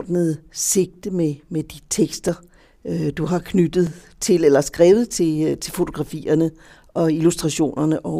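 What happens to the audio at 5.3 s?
Nothing goes wrong at 5.3 s; the speech continues through that point without any audible dropout, click or distortion.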